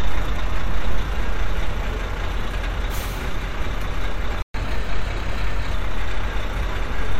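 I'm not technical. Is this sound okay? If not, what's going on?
No. A playback stall hits at 4.42 s: the sound cuts out for 120 ms, then resumes. The player most likely ran short of data or was briefly held up, so nothing reached the speakers until it recovered.

A catch-up at higher speed follows from 4.54 to 5.74 s. To recover the lost time, the player runs 1.1 times faster, which also raises the pitch by roughly one and a half semitones, before settling back to normal speed.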